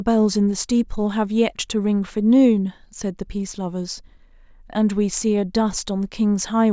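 No technical fault can be heard anywhere in the speech. Nothing in it needs a timestamp or a closer listen.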